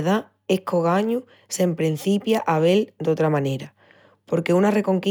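No technical faults are audible.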